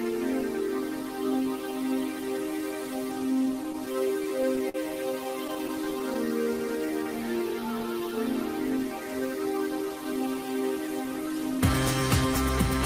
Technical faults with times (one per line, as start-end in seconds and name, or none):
3.63-4.76 repeated stalls (stutter)
5.24-6.28 repeated stalls (stutter)
6.28-7.88 jitter buffer slow-down
9.82-11.59 jitter buffer speed-up